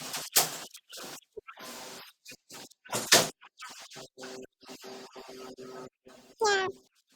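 From start to finish the speech is audio read two samples at a time (double speed). Each pair of samples is taken as one frame, so playback runs at 2x speed and a full octave (12 semitones) higher.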